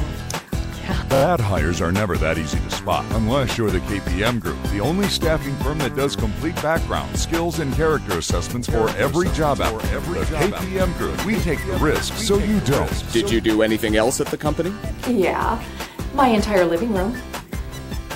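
From 1.14 to 1.22 s, repeated frames: one 26.1 ms block plays three extra times, adding 78.4 ms, a rapid stutter rather than a smooth dropout. From 8.70 to 13.40 s, a doubled audio track, likely from a second, slower capture path, trails about a second behind, about 10 dB quieter, full-band, with no decay, unlike real echo, and starting and stopping abruptly.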